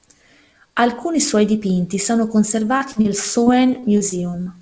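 Speech, carried over a call path whose band stops at 8 kHz, consistent with G.722 at 64 kbps, shows short concealed packet loss three times in quick succession: 2.78–2.83 s, right after "suoi dipinti sono", then 2.92–2.98 s and 3.01–3.07 s. Each time about 30 ms of audio failed to arrive, and the decoder bridged the hole by extending the preceding sound before crossfading back, leaving a brief smear or wobble in the speech. From 3.43 to 4.36 s the problem becomes repeated packet loss with a robotic sound: five separate dropouts, the longest 32 ms and together about 150 ms, so roughly 15% of that stretch is synthesized fill. Because each patch is followed closely by another, the speech turns choppy with fragments missing.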